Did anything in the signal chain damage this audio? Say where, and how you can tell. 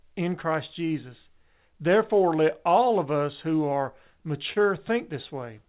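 Yes. At the network and jitter-buffer stage, clock drift between sender and receiver runs through the whole clip. The sender's clock is slow by roughly 1.5 percent, so the buffer keeps draining.

From 0.87 to 3.65 s, repeated timing corrections stretch the audio to about 99 percent speed. The receiver adds roughly 40 ms in small pieces.

From 4.53 to 4.58 s, there is a short stall from a late packet. The buffer ran empty, and 26 ms of fill holds a sound too long before playback resumes. No audio is lost. The A-law call codec carries nothing above 4 kHz.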